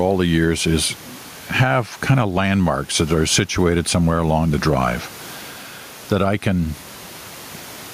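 Throughout the speech, the background swells up in every pause and ducks under each loud syllable, swinging by around 10 dB and leaving the speech squashed and flat. This gain pumping likely comes from input gain set far too high, with a fast limiter clamping down on every peak.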